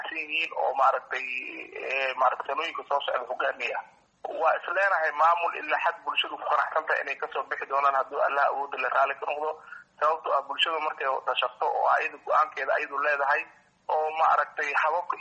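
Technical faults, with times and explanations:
Nothing stood out on listening to this recording.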